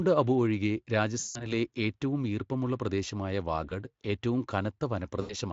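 A speech recording shows VoIP packet loss concealed by the speech codec at 1.19 to 1.53 s, briefly at 3.69 s, and at 5.21 to 5.35 s. Unlike a silent dropout, each gap is filled by a fading, buzzy or noisy stretch of the preceding sound, lasting about 160 ms, 20 ms and 80 ms, over the light Speex coding.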